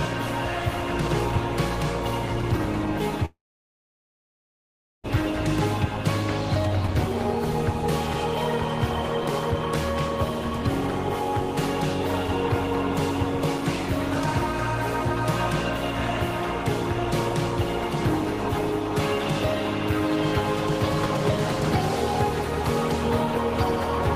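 Long network dropout from 3.25 to 5.12 s: a brief fading buzz turns to silence, likely a stalled stream, and the audio returns with about one second missing.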